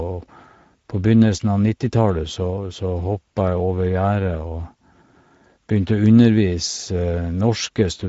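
Speex codec damage runs through the whole clip. Speech sounds noisy and hoarse, pointing to a rate near 17 kbps. Nothing reaches above 7.7 kHz.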